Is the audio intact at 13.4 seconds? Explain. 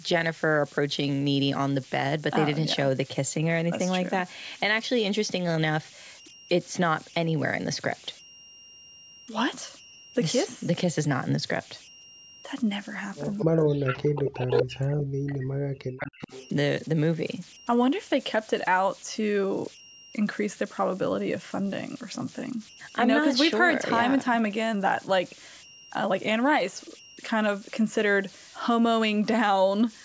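No, three things overlap there. From 13.38 to 13.45 s there's a brief echo leak: a scrap of speech comes back about 232 ms late and around 10 dB under the talker. That's likely the far end's echo canceller letting some of its loudspeaker pickup slip through.

Right on its heels, from 13.44 to 16.32 s, you get speech suppressed in double talk. The voice dips hard, at its worst by something like 40 dB, and is turned down for around three seconds. The likely cause is an echo canceller that couldn't tell the talker from the echo while both sides were speaking, so it pulled everything down.

Under all of it sit converter idle tones, a tone around 3 kHz with grainy noise about 22 dB below the signal. An undithered delta-sigma converter fell into repeating bit patterns whenever its input got small.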